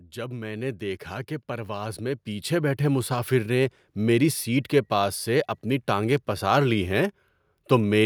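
From 0.13 to 3.38 s, automatic gain rising: the gain control judged the input too quiet and lifted it by about 12 dB, ending just before "نے میری سیٹ کے". Voice and background swell together slowly, unlike a compressor's quick pumping, which releases between phrases.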